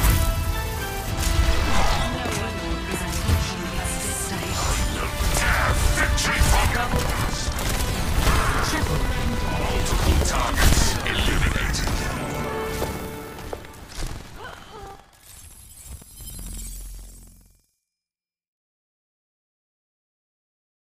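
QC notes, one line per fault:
6.87 s to end: buffer tearing. A steady robotic rattle at 21.5 Hz, consistent with a 2048-sample buffer. Writer and hardware read pointers have slipped, so roughly a tenth of each period replays audio about 100 ms stale, hard-spliced at both edges.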